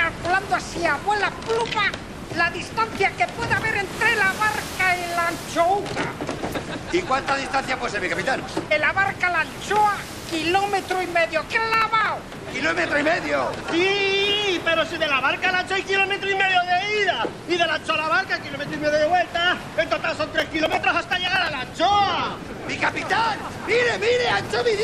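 From 11.74 to 12.60 s, and again from 20.40 to 21.48 s, processor overload crackle breaks out. The processor keeps missing deadlines on buffers of around 5 ms. Each miss replays stale audio with hard edges. The result is a gritty, tearing burst.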